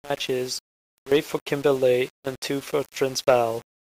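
A speech clip with grainy, signal-following distortion throughout, likely from low bit depth without dither, consistent with about 6 bits rounded. The error sits roughly 25 dB below the speech. A waveform shows visible stair-steps, and a spectrogram shows broadband grit that appears and vanishes with each syllable.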